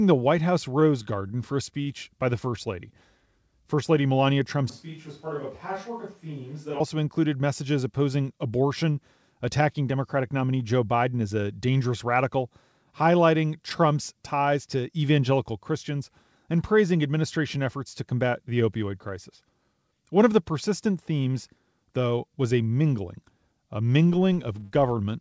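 Speech carried over a WebRTC call path with a G.722-style codec, audible in its coding noise and in an upper limit of 8 kHz, shows three faults. From 0.80 to 1.88 s there are repeated stalls (stutter): packets reached the jitter buffer late, so it emptied four times, and the receiver stretched the last sound to cover about 105 ms in all. The longest gap is 42 ms, and roughly a tenth of that stretch is concealment. Nothing is lost, but the speech drags and catches in small hitches. From 4.70 to 6.80 s the signal most likely comes from a distant microphone after the close one dropped out. The speech turns abruptly roomy and hollow and loses bass. It falls about 10 dB in level, with room noise only about 30 dB below it, and the return to the close sound is just as sudden. From 24.12 to 24.92 s a filter restarted on every block, losing its state and beginning each block from silence. Each restart leaves a small transient, and together they form a 188 Hz buzz whose loudness follows the speech. 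That rate fits a 256-sample block at 48 kHz.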